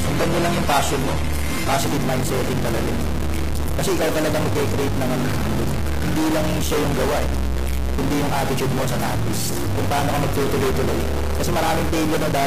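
From the start to 1.78 s the treble is cut off, and codec smearing is stronger. Then the top end returns suddenly with no gap or dropout. This is an adaptive stream starting at a low bitrate. The player opened on a cheap version, which sounds like roughly 32 kbit/s AAC, and moved up, to around 96 kbit/s, once it had measured the connection. A dropout or a buffering stall would leave a silence. Here there is only a clean step in quality.

Running through the whole clip is a steady buzz at 43.1 Hz, and the audio plays 1.12 times too fast while keeping about its normal pitch. This is a block size mismatch (truncated). Each block written upstream is longer than the 1024-sample reads that follow, so the tail of every block is discarded. The regular cut at each boundary makes the buzz. Pitch-shifted or resampled audio would rise in pitch along with the speed. This audio does not.

Also present throughout is a gritty distortion that stays on the waveform, with a hiss that fills the quieter passages instead of falling away. 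The likely cause is a stuck bit: one data bit held at a fixed value by a faulty line or converter. That pushes about half the samples off by that bit's weight and flips small values around zero. Clipping would only appear on peaks. This grit does not rise and fall with level.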